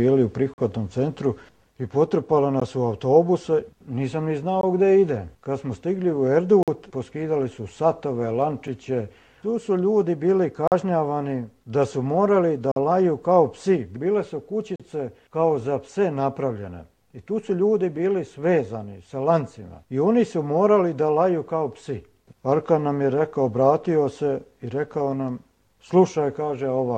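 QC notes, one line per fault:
0.54, 2.60, 4.61, 6.63, 8.67, 10.68, 12.72, 14.76 s: gap between stream segments. Hard-edged silent holes of 4 to 48 ms, about every 2 s, where segment timestamps leave gaps the player fills with silence.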